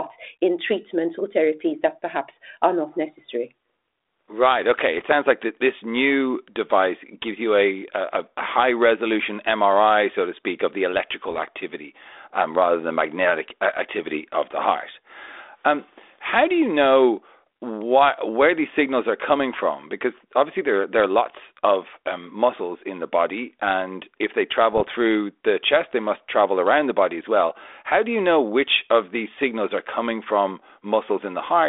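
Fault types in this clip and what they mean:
Bit errors on an ADPCM link: flipped bits in the 32 kbit/s G.726 stream knock the decoder's step size and predictor off course, so each hit rings on as a rough burst with a pop and a brief level jump, at 4.98, 11.27 and 24.73 s, each lasting 0.1 to 0.17 s. Unlike packet loss, the sound never drops out; it carries on but turns harsh, fitting an error rate of a few tenths of a percent.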